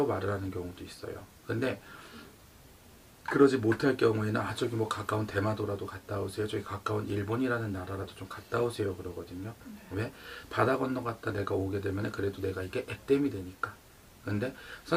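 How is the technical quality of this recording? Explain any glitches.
The technical quality of this recording is sound, with no glitches to explain.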